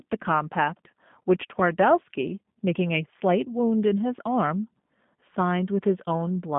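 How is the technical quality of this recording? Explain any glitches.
The recording has one fault that runs through the whole clip: plainly audible G.729 codec damage. The speech is narrow and boxy, confined to roughly 150 Hz to 3.6 kHz with nothing above 3.7 kHz, and it carries a rough, slightly synthetic texture. That points to the G.729A variant at a rate that fits 8 kbit/s. The codec discards the actual waveform and rebuilds each 10 ms frame from a vocal tract filter, a pitch predictor and a few sparse pulses, which leaves the grainy, artificial edge.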